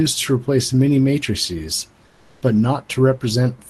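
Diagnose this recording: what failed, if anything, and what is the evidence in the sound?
From 2.11 to 2.41 s the faint room background turns smooth and featureless, with its level shifting by only about 1 dB: comfort noise in place of the background, likely from Opus DTX in call processing.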